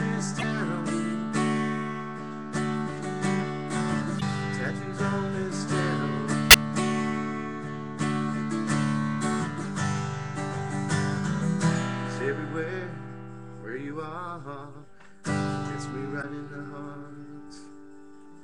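Damaged data in a compressed stream shows up as brief glitches at 0.38–0.44, 4.17–4.22, 6.50–6.54 and 16.18–16.24 s, where corrupted frames throw the decoder out of sync.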